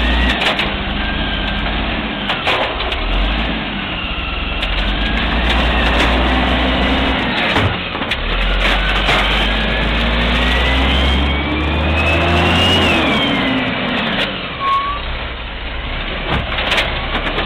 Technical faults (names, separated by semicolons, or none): none